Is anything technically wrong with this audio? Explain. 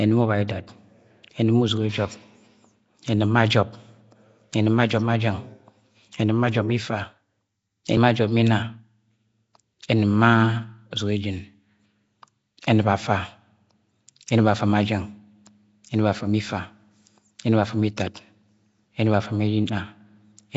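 Yes. Throughout the clip the speech has a rough, hissy halo and a smeared, underwater quality, with nothing above 7.7 kHz. This is likely Nellymoser compression at a low rate, consistent with about 32 kbps. The codec gives weak bands no bits and fills them with noise. That noise fill makes the hiss seem grainy and attached to the speech itself, which separates it from a plain low-pass filter or steady background hiss.

At 17.97 s there is pre-echo: about 14 ms of hiss arrives just before a sharp attack, which then sounds soft. The codec spreads quantisation noise across its whole block, so the quiet moment before the onset gets noise sized for the loud part. It sits before the attack, unlike reverb.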